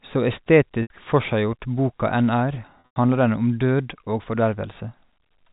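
At 0.82–0.90 s, before "forseggjort boka enn er", and 2.80–2.96 s, before "handler den om død", packet loss with pitch repetition bridges the gaps with a held, buzzy repeated pitch period that fades into silence before the speech returns.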